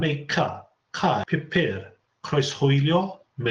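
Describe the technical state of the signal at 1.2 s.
A skip ahead at 1.23 to 1.25 s: roughly 0.4 s of speech was dropped while later audio was queued, so playback jumps forward with no gap, splicing the two sides together.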